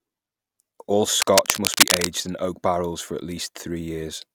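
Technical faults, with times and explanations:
1.21 to 2.07 s, cable scratch noise: A dense, uneven burst of scratching and rustling sits over the speech for under a second. It is a little louder than the speech itself, so it masks much of that stretch. The likely cause is a worn cable, connector or control being moved. Its contact resistance then jumps about rapidly. Each jump injects a small, irregular spike of noise, and many together form the scratchy texture.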